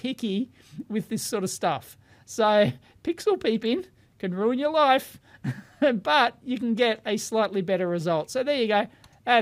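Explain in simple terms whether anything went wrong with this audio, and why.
Nothing stood out as wrong on listening; the audio comes across steady and even, with no moments that sound broken or out of place.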